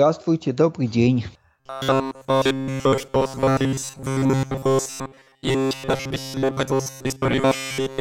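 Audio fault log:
1.60 to 8.00 s, robotic sound from repeated short buffers: the speech turns into a rigid metallic buzz locked at 134 Hz, likely from a buffer of roughly 7.5 ms repeating in place of most of the incoming audio. Unlike dropouts, no silent gaps appear.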